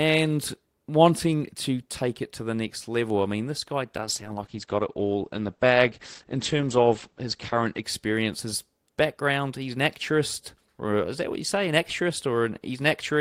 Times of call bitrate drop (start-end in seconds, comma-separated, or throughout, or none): 4.01-7.90